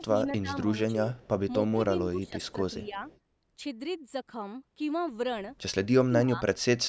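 From 0.0 to 0.5 s and again at 1.04 to 1.14 s, the speech dips by roughly 10 dB in short bites. This is speech suppressed in double talk, likely because the echo canceller turned down the near talker along with the far-end echo. A very faint echo leak follows at 1.16 to 1.28 s: a delayed copy of the speech, about 267 ms behind, likely residual loudspeaker pickup that the canceller missed. Between 1.59 and 3.02 s the level again ducks by around 10 dB in patches, likely the same double-talk suppression, while a faint echo leak sits underneath at 2.27 to 2.52 s and another follows just after at 3.08 to 3.19 s, again 267 ms late, likely from incomplete echo removal. Near the end, at 6.04 to 6.42 s and 6.78 s to the clip's end, the speech is cut much deeper, by roughly 30 dB or more, so it nearly drops out, likely from heavier double-talk suppression.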